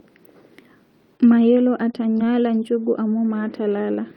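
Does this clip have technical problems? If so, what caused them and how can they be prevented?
Yes, this speech clip has two related packet-loss problems.

Short concealed packet loss shows up at 1.17 to 1.21, 1.91 to 1.95 and 2.17 to 2.21 s. Each time about 20 ms of audio arrived too late, and the receiver papered over it by extending the preceding sound, so you get a quick smear or wobble. A steadier network path or a larger jitter buffer would keep late packets from being dropped.

A lost packet rebuilt from error correction follows at 1.31 to 1.33 s and overlaps the later two gaps at 1.93 to 1.95 and 2.19 to 2.21 s. Each 20 ms stretch was played from the low-bitrate backup copy carried in the next packet, so there's no hole, but those moments sound rougher and noisier. Fixing the underlying loss is the real cure, though a higher bitrate gives the backup copies more detail.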